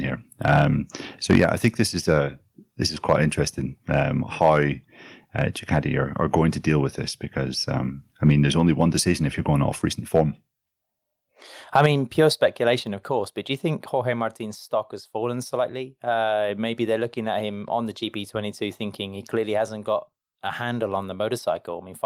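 Input gain set too high likely drives the converter into microphone overload from 0.45 to 2.18 s, just before "this is", with peaks about 7 dB past full scale. The flattened tops give the loudest syllables a harsh, crackly edge. At 1.36 s a microphone volume step-down, likely the call software cutting input gain after that distortion, drops speech and background together by about 3 dB. Overload returns from 3.08 to 6.41 s (about 4 dB over), 8.25 to 9.11 s (about 1 dB), 10.15 to 10.21 s after "you're going off recent" (about 3 dB, the most densely clipped burst), and 11.75 to 11.86 s (about 2 dB). Further abrupt drops of about 4 dB follow at 11.86 s, right after that last crackle, and at 12.87 s, just before "of course but do".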